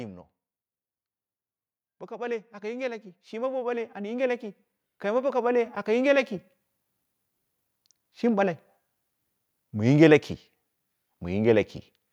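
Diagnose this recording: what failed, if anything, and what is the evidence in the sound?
Automatic gain rising, from 2.07 s to 6.22 s, at the call-processing stage. Across those four seconds the level climbs steadily by about 15 dB, and the background noise floor swells in step with the speech rather than staying put. That joint rise points to the automatic gain control: it judged the input too quiet and kept raising its gain, lifting everything in the signal together.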